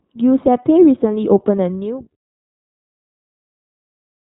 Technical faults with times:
0.00-4.35 iLBC codec

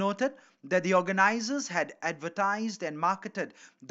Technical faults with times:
none

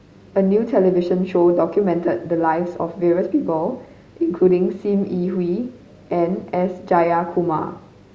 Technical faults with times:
none

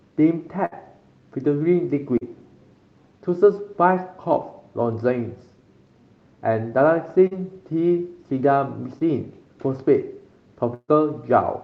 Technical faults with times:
0.65-0.74 burst of packet loss
2.18-2.23 short concealed packet loss
7.27-7.33 short concealed packet loss
8.99-9.02 short concealed packet loss
10.74-10.90 burst of packet loss

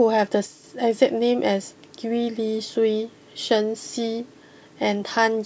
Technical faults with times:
0.46-0.64 one channel drops out

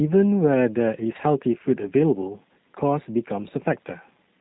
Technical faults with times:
0.00-4.41 G.729 codec

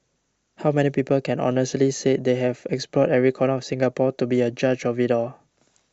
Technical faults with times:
none

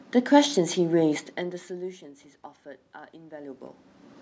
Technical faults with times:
none

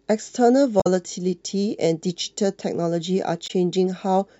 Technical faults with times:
0.80-0.87 damaged data in a compressed stream
3.46-3.51 damaged data in a compressed stream

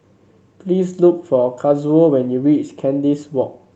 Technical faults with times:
none

